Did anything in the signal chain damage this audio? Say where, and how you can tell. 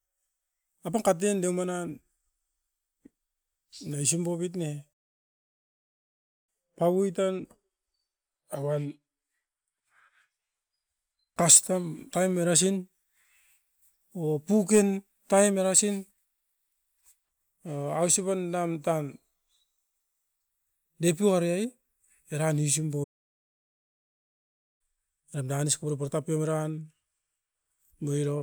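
Yes: playback stalls at 4.93–6.49 s and 23.03–24.81 s cut the speech to flat-line silence, blank spectrogram columns, likely from the player's buffer running dry.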